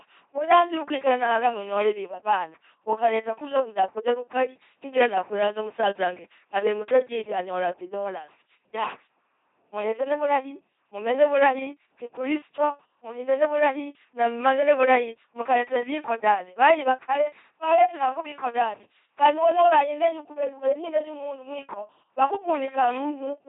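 LPC-10 vocoder coding runs throughout the speech, with heavy damage consistent with a 2.4 kbit/s rate. A ten-pole filter excited only by buzz or hiss flattens the voice into a mechanical drone, with nothing above 3.8 kHz, and misjudged voicing produces stray buzzes or hiss.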